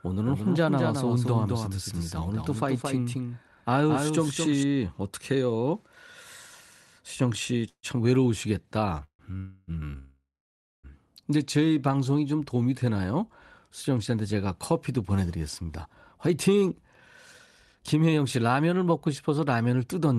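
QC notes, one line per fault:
0.00–4.63 s, doubled audio track: a second full-band copy about 5 dB quieter trails by about 200 ms, already present at the start and cutting off abruptly. This is likely a second capture path or misaligned edit. On the spectrogram, every onset appears twice, 0.2 s apart.
7.69–7.86, 9.04–9.22, 9.37–9.71, 9.98–10.87 s, call audio freeze: the last sound stretches into a fading buzz, then goes silent for 70, 90, 0 and 590 ms. Audio resumes where it stopped, adding 146, 149, 305 and 860 ms of gap. This is likely packets delayed until the jitter buffer ran dry. On the spectrogram these are smeared flat bands, then blanks.
15.22–19.39 s, jitter buffer speed-up: the sound runs about 12% fast at unchanged pitch and sounds hurried, with roughly half a second trimmed out as the buffer cut short pitch-period pieces to shed a backlog. The waveform shows compressed syllable spacing, while the harmonic spacing on the spectrogram stays the same.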